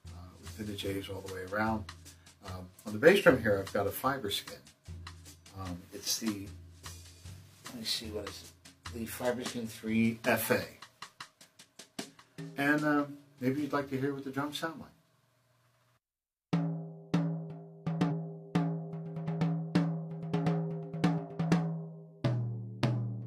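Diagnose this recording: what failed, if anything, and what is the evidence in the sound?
The codec stage failed, through damaged data in a compressed stream. A brief glitch sounds from 18.07 to 18.12 s, about 50 ms long. Corrupted bytes reached the decoder there. It could not parse those frames, lost sync and scanned ahead for the next valid frame header. The garbled output is the result.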